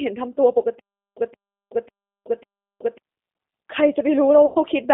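From start to finish the speech runs through the G.729 codec, and the damage is plainly audible. The line is squeezed to roughly 250 Hz to 3.6 kHz, so it sounds thin and boxed-in, and at 8 kbit/s the codec is rebuilding the voice from a filter model and a few pulses per frame instead of carrying the actual waveform. That gives it the rough, slightly synthetic edge you'd expect from a VoIP call.

Between 0.79 and 2.98 s there's a stutter with silent gaps. A burst of about 173 ms plays, then about 373 ms of dead digital silence, then the same burst again, repeating every 546 ms for four rounds. The likely cause is a stream or player stalling and replaying its last fragment on each retry before running dry. Whatever should have played during that stretch never arrives, so that part of the speech is simply gone.

At 4.46 to 4.57 s there's VoIP packet loss concealed by the speech codec. Around 90 ms of audio is missing, which fits three lost 30 ms packets. 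The decoder fills the hole by extending the last pitch and filter state with falling gain, so the speech smears into a brief buzzy tone or coloured noise that fades. Because each frame leans on the one before, the voice stays weak or distorted for a while just after.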